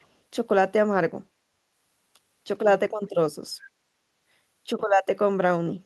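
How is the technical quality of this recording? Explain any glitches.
One short glitch occurs right at the start. Echo leak, 0.00 to 0.07 s: a very faint copy of the speech returns 416 ms late, likely loudspeaker pickup the far-end canceller missed. It is a distinct delayed repeat, not reverberant smear.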